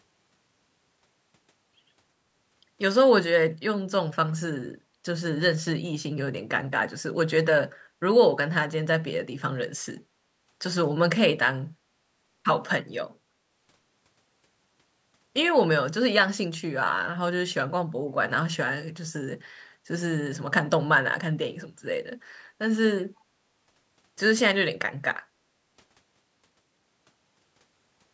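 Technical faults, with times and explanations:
10.13–10.28 s and 25.40–25.52 s, background gated by the echo canceller: while the loudspeaker was playing, the canceller clamped down on the microphone, so the room tone briefly sinks by about 9 dB and then about 8 dB, lasting about 0.15 s and 0.1 s, before recovering once the suppression released.
23.16–23.21 s, echo leak: a very faint delayed copy of the speech, around 40 dB below it and trailing by 336 ms, flickers up for a brief moment. This is likely loudspeaker sound that the echo canceller failed to fully remove and that was sent back down the line.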